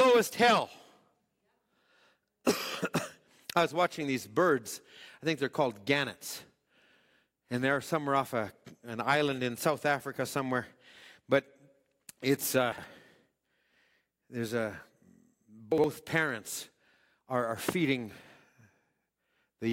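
At 12.72 to 12.84 s and again at 15.72 to 15.84 s, chunks out of order: a 60 ms chunk was delivered one chunk late and plays after its neighbour. Nothing goes missing, but each swap causes a brief jumbled stutter in the speech.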